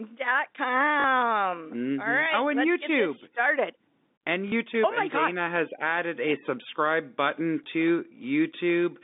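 Packet loss with the last packet repeated occurs at 1.00–1.04 s, 4.48–4.52 s and 7.64–7.66 s, where the receiver replays stale audio. The first two gaps fit two 20 ms packets and the third fits one. The first two sound like a brief robotic stutter, and the third like a small blip. The waveform shows a copied block with abrupt joins.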